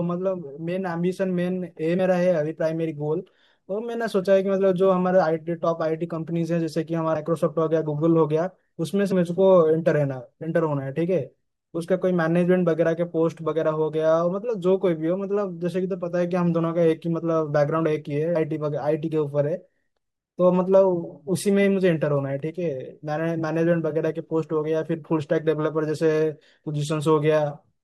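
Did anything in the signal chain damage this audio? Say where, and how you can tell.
Yes. The speech lurches forward at 1.98, 7.15, 9.11 and 18.35 s, dropping about a tenth of a second each time, nearer 150 ms at 7.15 s. These are compressed frames skipped at the decoder. Whole frames, consistent with a 21.3 ms frame size, never play, so the audio jumps ahead by the length of the frames left out.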